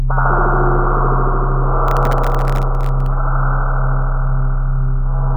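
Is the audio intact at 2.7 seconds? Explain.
No. At 2.7 seconds the audio is inside a burst of processor overload crackle running from 1.88 to 3.06 s. Dozens of very short buffers, each under a millisecond, miss their deadlines and replay stale audio with hard edges, producing gritty tearing over the sound.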